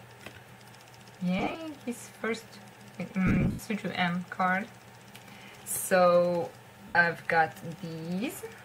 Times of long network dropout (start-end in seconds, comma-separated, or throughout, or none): none